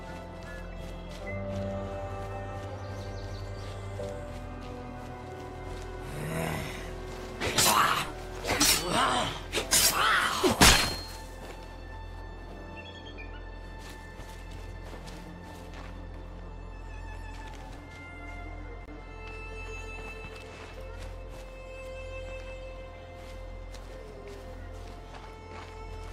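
A block of digital silence at 2.46 s drops the sound to zero for about 0.67 ms, which fits a 32-sample buffer left unfilled, heard as a single tick.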